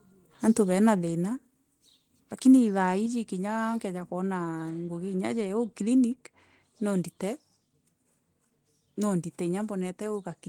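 Microphone volume stepped down three times, likely automatic input-gain cuts: the speech and background drop abruptly by about 3 dB at 1.02 s after "antû bena", about 4 dB at 3.06 s before "ûa kkeja", and about 1 dB at 6.12 s after "ngûgi ya ûjû".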